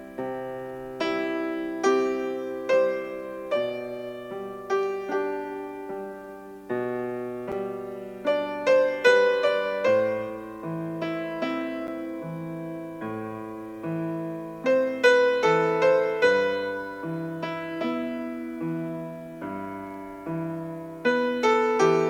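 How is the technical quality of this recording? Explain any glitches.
Two brief glitches break the recording, at 7.52 s and 11.87 s. Each is heard as a sharp tick, the sound vanishing for about 7 ms and 8 ms respectively. These are blocks of digital silence: short runs of samples replaced by zeros, typically because the output buffer was not filled in time. The signal drops straight out and back with no fade, and the gap is too short to register as a hole.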